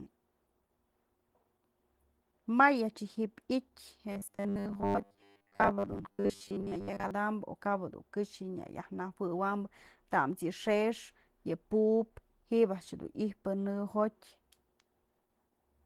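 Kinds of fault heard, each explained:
Opus compression: The speech carries a grainy, rough texture throughout, with hoarse, muffled consonants and vowels that sound noisy rather than clean, though content still extends across the full band. This is likely low-rate Opus coding, where band energies are preserved but fine detail is replaced by folded or noise-filled content. The character points to a rate near 16 kbps and the encoder working in its hybrid speech mode.
Robotic sound from repeated short buffers: From 4.12 to 7.11 s the speech turns into a rigid, metallic buzz pitched at 100 Hz, still loosely following the speech but with a fixed pitch imposed on it. The likely cause is late-arriving audio being covered by looping the most recent fragment, and a 100 Hz buzz fits a repeat length of 10 ms. Most of the audio in that span appears to be repeats rather than new material.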